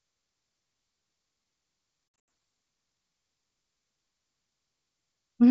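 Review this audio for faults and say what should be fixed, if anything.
Packet loss on an ADPCM call at 2.28 s: about 160 ms of audio drops to hard-edged silence, scattered across 200 ms with the longest gap 80 ms, which suggests roughly seven lost packets. The G.722 decoder's predictor and step size lose track of the sender's, so speech returns with brief distortion before settling. Enabling packet loss concealment, with the ADPCM decoder state resynchronised after each gap, would prevent this.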